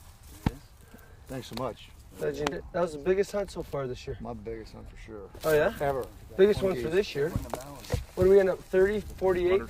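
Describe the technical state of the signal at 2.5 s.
At 2.51 s there's a brief glitch from damaged data in a compressed stream. Part of the encoded data there is corrupted, so the decoder misreads those frames, loses sync and hunts for the next valid frame header. It comes through as a chirp, squawk, click or short hole.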